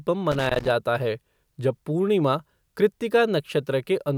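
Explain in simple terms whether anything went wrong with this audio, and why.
A burst of loose connector crackle runs from 0.31 to 0.71 s: a worn or dirty contact kept cutting in and out, chopping the speech into scratchy crackle.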